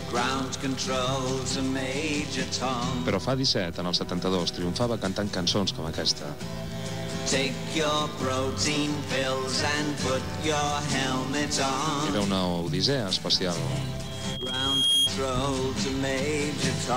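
From 14.04 to 15.12 s a single 3.3 kHz tone swells over about a second into a squeal above the sound: loudspeaker feedback, the microphone re-amplifying its own speaker.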